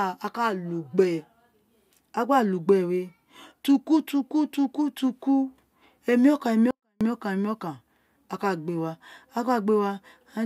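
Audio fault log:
6.71–7.01 s: 24-bit alignment error (too quiet). For 0.3 s the speech falls about 48 dB in a single step, leaving it barely audible, then returns at full level. The samples sat in the lower three bytes of each 32-bit word but were read as if they filled the whole word, so every value came out 256 times too small. Unlike a dropout, the sound is still there, faint but undistorted, with no fade at either edge.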